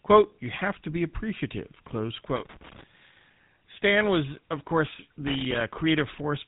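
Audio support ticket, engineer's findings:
Buzzy, gravelly roughness across the whole speech clip, plainly audible, with nothing above 3.9 kHz. Probable component: GSM full-rate codec in the path, consistent with a 13 kbit/s coder. Vocal-tract model driven by a coarse, regularly spaced pulse excitation, so the pulse structure comes through as the grit and the top end is cut.

Irregular burst of crackle and scratching, 2.36 to 2.84 s. Probable component: loose connector, worn or dirty contact. The contact makes and breaks rapidly as it shifts, chopping the signal, with any DC on the line adding pops.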